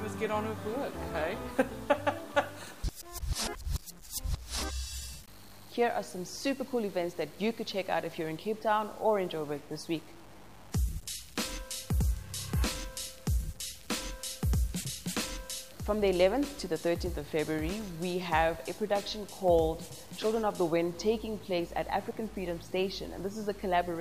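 From start to finish the audio shows low bit depth without dither, with an error about 25 dB below the signal, likely from truncating to 7 bits. Unlike dithered noise or ordinary hiss, which run independently of the sound, this error moves with the signal itself.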